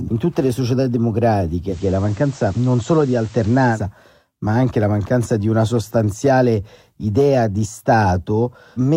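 Digital radio blending to analogue occurs from 1.66 to 3.80 s. The receiver lost its digital stream and cross-faded in 106 ms to the FM broadcast, then back. The speech gains faint hiss roughly 30 dB down, and holds level.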